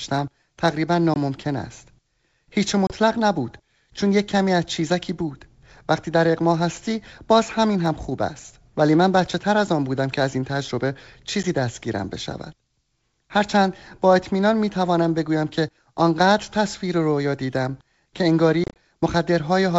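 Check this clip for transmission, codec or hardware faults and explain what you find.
The clip has packet loss on an ADPCM call, heard four times. Brief silent holes appear at 1.14–1.17 s, 2.87–2.93 s and 11.43–11.45 s. Near 18.64–18.77 s there is a cluster of about ten lost packets scattered over 120 ms. Each missing chunk is filled with silence, and the decoder's predictor and step size drift away from the sender's. Speech then resumes slightly distorted before recovering. That recovery, not a clean restart, separates it from simple dropouts. The G.722 wideband sound stays clear.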